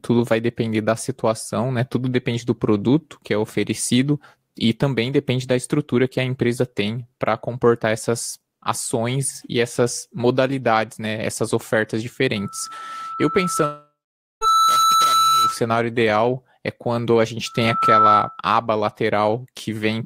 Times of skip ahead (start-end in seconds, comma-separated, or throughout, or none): none